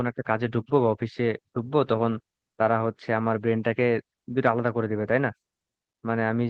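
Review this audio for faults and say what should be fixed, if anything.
Lost packets rebuilt from error correction at 2.69–2.79 s, 3.16–3.18, 3.40–3.42, 3.48–3.50 and 3.52–3.54 s: the decoder played low-bitrate copies carried in-band, giving rough, noisy 20 ms patches without gaps. Prevent this by reducing packet loss on the network path.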